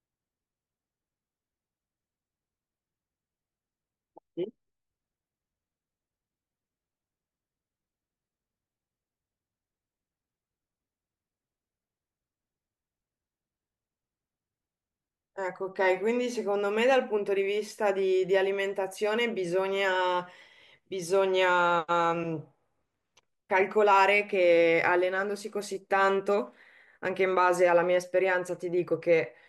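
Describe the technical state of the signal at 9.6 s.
At 9.6 s the speech signal is intact, with no fault audible at that moment.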